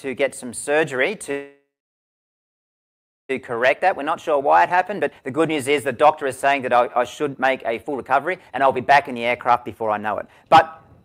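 At 1.31 s the sound stops moving forward. What follows is a call audio freeze lasting to 3.31 s. The likely cause is packets stalling in transit until the jitter buffer ran dry. The receiver stretched the last sound into a short fading tail. Then about 1.65 s of silence follows. Nothing is lost. The audio resumes where it stopped, now about 2 s late.

From 3.41 s to the end, a jitter buffer speed-up takes over. The receiver is working off that built-up delay. It cuts out tiny slices, each a pitch period or a few, again and again. Pitch stays the same. Playback runs at about 124 percent of normal speed. Roughly two seconds of material disappear this way. The result sounds rushed.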